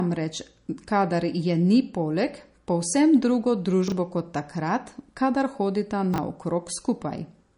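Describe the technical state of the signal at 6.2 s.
Around 6.2 s, just after "kot takrat kadar hodita", a 20 ms chunk was delivered or written one slot late, so it plays after the chunk that should have followed it. This is the chunks-out-of-order fault, spanning 6.14 to 6.18 s. No audio is lost, but the sequence is swapped and the three hard joins it creates are heard as a brief jumbled stutter.

The same stretch also carries the MP3 compression damage that runs through the whole clip, likely from a low-bitrate MP3 encode, around 40 kbps. Short of bits, the encoder removed everything above 10.6 kHz and dropped weak frequency lines from frame to frame. The result is dull, plainly audible codec damage with a watery, swirling texture and smeared consonant attacks.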